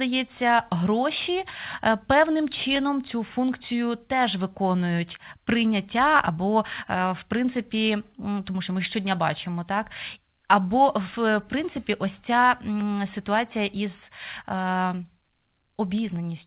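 No technical faults are audible.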